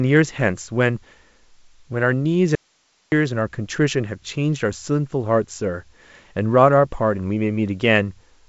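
At 2.55 s the speech cuts out abruptly and stays gone until 3.12 s, about 0.57 s lost. Only hiss fills the gap, roughly 45 dB down. That's an audio dropout to a faint residue, likely the source breaking while the path after it stayed live.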